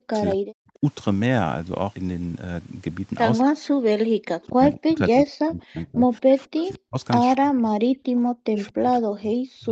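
The speech in this recording keeps sinking and breaking up. From the start to 0.84 s, over most of the stretch from 3.44 to 6.98 s (about 3 s in all), and again from 7.41 s to the end, the level drops in pieces, at worst by around 40 dB, so syllables fade or vanish. This is speech suppressed in double talk. The likely cause is both ends talking at once, with the echo canceller unable to tell this talker from its loudspeaker echo and pulling everything down. Inside that middle stretch, at 4.42–4.47 s and 6.58–6.75 s, a faint copy of the voice trails the original by 225 ms, roughly 30 to 35 dB below the speech. That is echo leak, likely from a loudspeaker end whose echo canceller let part of its microphone pickup pass back into the call.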